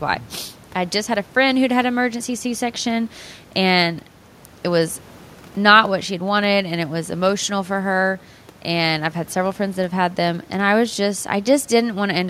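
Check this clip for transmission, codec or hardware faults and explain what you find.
No transmission, codec or hardware faults can be heard.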